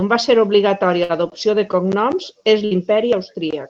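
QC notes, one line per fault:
1.03–1.12 s, burst of packet loss: just before "l'adopció de cognoms és", the last sound is briefly held and fades, then speech jumps ahead. Lost packets were concealed, and 60 ms of speech is missing.
2.65–2.74 s, burst of packet loss: right after "l'adopció de cognoms és", the sound smears into a fading hold before resuming. Consecutive packets were lost and replaced by concealment, skipping 60 ms of speech.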